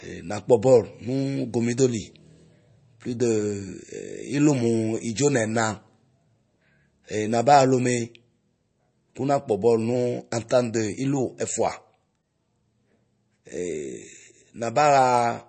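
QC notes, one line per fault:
Throughout: MP3 compression. Nothing is heard above about 8.3 kHz, and the speech sounds plainly watery and swirly, with smeared attacks and chirpy s sounds. This likely comes from a low-bitrate MP3 encode, near 34 kbps, that cut the treble and switched weak frequency lines on and off.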